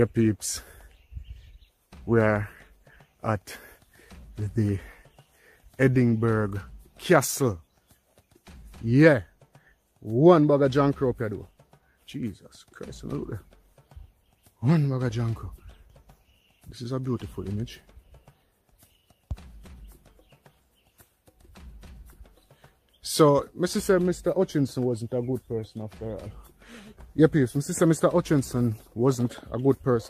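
No technical faults can be heard anywhere in the clip. Nothing in the sound points to a problem in how it was captured, processed or delivered.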